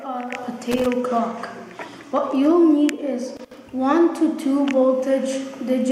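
A worn or dirty contact in a connector is making and breaking as it shifts, chopping the signal. That is loose connector crackle, heard as irregular scratchy bursts from 0.72 to 0.86 s and again from 3.37 to 3.58 s.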